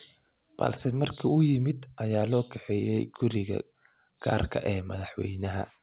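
There are no technical faults to describe in this speech clip; it carries the narrowband sound of a telephone-grade call path, with nothing above 4 kHz.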